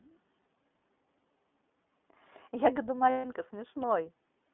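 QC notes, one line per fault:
throughout, iLBC codec: the audio sits in a 200 Hz to 3.5 kHz band with a plainly audible rough, synthetic edge. This fits the 15.2 kbps mode with 20 ms frames. Unlike a simple band-limit, the graininess comes from coarsely coded excitation rather than filtering alone.
0.42–0.46 s and 3.10–3.26 s, lost iLBC frames: missing packets, 40 ms and then 140 ms long (which fits two and seven 20 ms frames), are bridged by a repeated pitch cycle mixed with noise. Each gap sounds like a held, buzzy vowel rather than silence, and the longer one fades. The voice returns almost at once afterwards, with none of the lingering smear of codecs whose frames depend on their predecessors.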